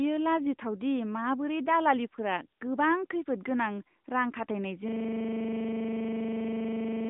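From start to finish the speech has been squeezed through an AMR narrowband mobile codec. The encoder models the voice as a vocal-tract filter excited by a few pulses per subframe, and it runs at a low mid-range rate, which fits roughly 10 kbps. The result is a telephone band of about 150 Hz to 3.7 kHz with nothing above 3.8 kHz, and a plainly buzzy, synthetic edge on every syllable.

At 4.88 s a system hang loop takes over and lasts to the end of the clip. Playback froze while the sound hardware kept replaying the same 40 ms stretch of its ring buffer, dozens of times over. That exact repetition at 25 Hz is heard as a rapid, mechanical stutter, close to a coarse buzz, and the speech never resumes.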